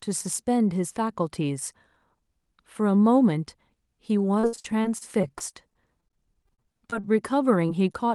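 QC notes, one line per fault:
4.39–7.07 s, repeated packet loss (robotic sound): 22 gaps, the longest 59 ms, with about 18% of the stretch concealed. Each gap is bridged by extending the preceding sound before the next loss arrives, so the audio turns choppy, with fragments missing.
7.66–7.83 s and 7.92–7.96 s, short concealed packet loss: each event drops about 20 ms, patched by continuing the prior pitch or shaped noise and then blended back. The result is a brief smear or wobble, with around 10 ms of extra length on the first.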